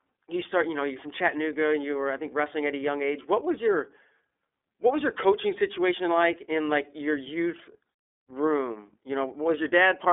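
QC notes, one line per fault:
Throughout: iLBC codec. Nothing above 3.7 kHz, a 300 Hz to 3.6 kHz telephone band. Each 30 ms frame is coded alone, giving plainly rough, synthetic speech, consistent with about 13 kbps.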